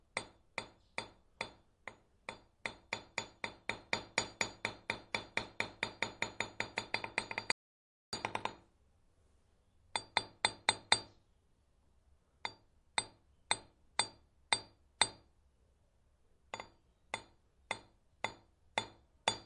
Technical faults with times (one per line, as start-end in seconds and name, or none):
7.52-8.13 audio dropout to silence